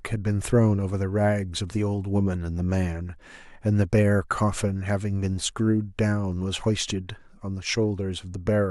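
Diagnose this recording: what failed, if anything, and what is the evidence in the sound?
No fault found in the recording.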